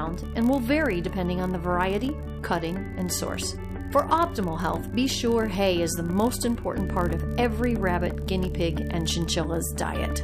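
From start to end the audio carries a block size mismatch (padded): each block written falls slightly short of what the next stage reads, and zeros fill the remainder. This leaves a brief gap per block, heard as a steady 43.1 Hz buzz, consistent with 1024-sample reads. Playback runs at 0.999 times normal speed, with pitch essentially unchanged.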